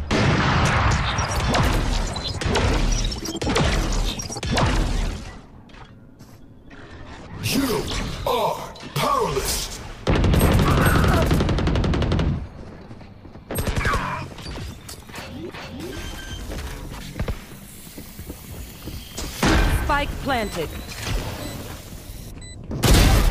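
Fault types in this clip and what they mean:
No technical faults can be heard anywhere in the signal, with level, continuity and timing holding steady throughout.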